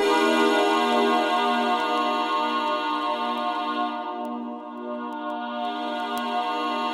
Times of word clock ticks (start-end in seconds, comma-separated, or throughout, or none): 0.22-6.88